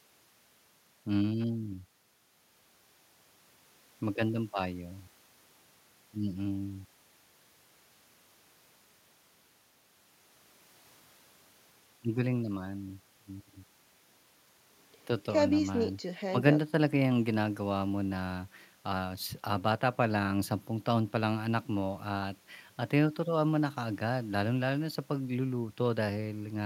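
No technical faults occur at any point in the speech, so there is nothing to place in time order.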